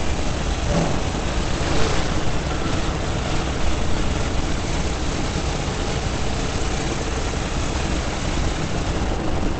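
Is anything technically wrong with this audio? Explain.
Yes. Opus compression, throughout: the sound is muffled and hoarse, with plainly audible damage and nothing above 8.6 kHz, which likely fits Opus's speech-oriented SILK mode at a low bitrate around 16 kbps, where the encoder narrows bandwidth and coarsely models the signal.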